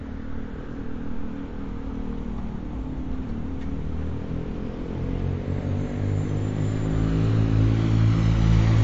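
Throughout the clip there is audible damage that is likely MP3 compression. Nothing is present above 7.5 kHz, giving a dulled top end, and weak frequency components switch on and off between frames, producing a watery, swirling texture consistent with a low bitrate near 48 kbps.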